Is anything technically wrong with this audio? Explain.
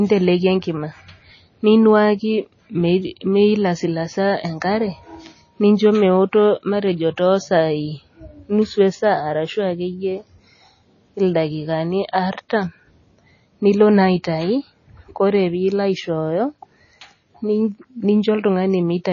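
Yes. Throughout, a hard ceiling near 7.1 kHz plus watery, swirling sibilants points to likely MP3 compression at a very low bitrate around 24 kbps; flickering dropped lines cause the swirl, and the encoder's fixed treble cut causes the ceiling.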